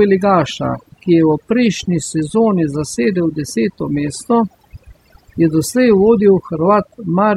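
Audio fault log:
Throughout, overdone noise removal: the noise reducer is set too hard, muting individual frequency bands near its noise estimate, so the background drops and breaks up into twinkling specks and quiet speech detail vanishes, unlike a noise gate's clean full-band cut-offs.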